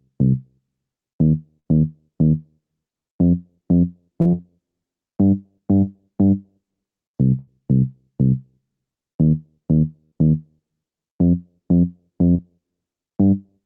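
The audio has two kinds of network dropout. A burst of packet loss occurs at 1.59–1.67 s, 7.39–7.49 s and 10.05–10.13 s, each removing 60 to 80 ms. The receiver stretched the preceding sound and faded it out, so each gap plays as a held buzz or dying hiss before the audio resumes further on. On a spectrogram this looks like horizontally smeared, decaying bands ending in a sharp restart. Short concealed packet loss occurs at 4.21 s, 5.75 s and 12.31 s, losing 20 to 40 ms each. The decoder patched each hole by extrapolating the last waveform and then blending back, which is heard as a brief smear or wobble. On the waveform each appears as a thin, overly regular stretch.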